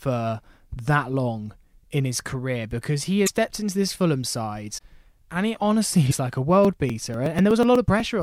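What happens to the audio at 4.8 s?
Right there, from 4.77 to 4.81 s, there's a brief garbled glitch and the speech skips ahead just before "and it honestly". That's likely a broken MP3 bit reservoir: frames were dropped, so the next frame, about 26.1 ms long, decoded using leftover bytes from the wrong frame.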